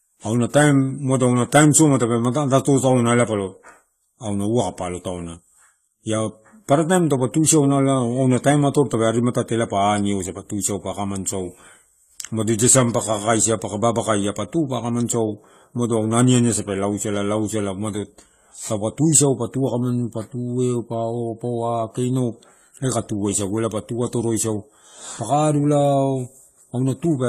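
Throughout, the speech is dull and warbly with nothing above 14.1 kHz, likely AAC compression quantising coarsely, which fits a low bitrate near 32 kbps.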